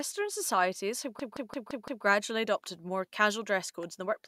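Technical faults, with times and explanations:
1.20–2.05 s, system hang loop: a frozen computer or driver left the hardware replaying one 171 ms slice of speech five times, a machine-gun stutter at 5.86 Hz, consistent with an 8192-sample buffer. The waveform and spectrogram show identical blocks repeating, with hard seams between them.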